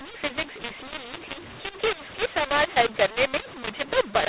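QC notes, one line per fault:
Throughout, mu-law and A-law mixed up: the speech was coded as G.711 mu-law but decoded as A-law, so the level curve comes out wrong. Loud parts crack harshly, quiet bits get pushed up, and the pauses fill with hiss. It's limited to the usual 4 kHz telephone band.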